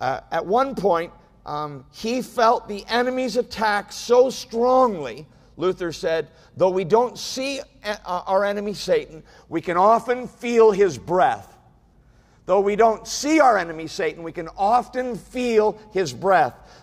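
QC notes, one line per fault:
No faults found across the whole clip.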